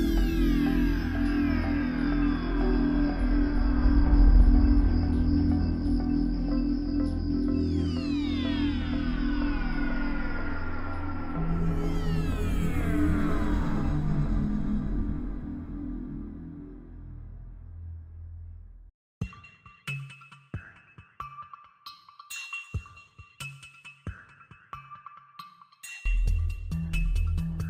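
No technical faults can be heard anywhere in this clip.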